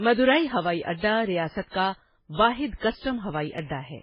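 A speech recording, with one fault running throughout. Nothing is heard above 5.2 kHz, so the top of the sound is dull and muffled. Several kinds of coding damage sit on top of each other and are heard together. The likely cause is transcoding between lossy codecs. The mix of artefacts points to a low-rate MP3, then Vorbis, then AAC-LC. Each codec wasted bits on the damage before it and added its own, and the lowest cut-off survived the chain.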